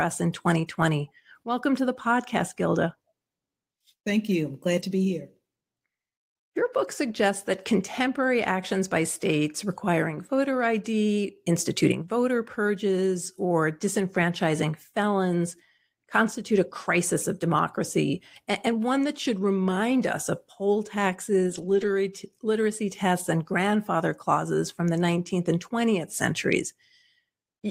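Speech clip with a lost packet rebuilt from error correction: from 21.49 to 21.87 s, just before "literacy tests and grandfather", lost packets were replaced by low-bitrate backup copies, so that stretch sounds rougher and noisier instead of dropping out.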